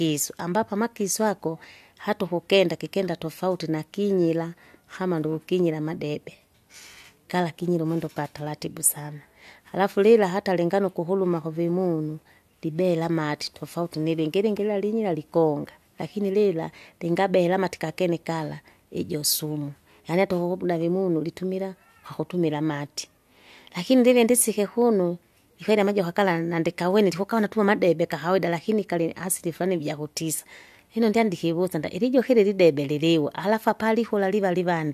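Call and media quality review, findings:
No faults found in this speech clip. Nothing to log against the call or media path.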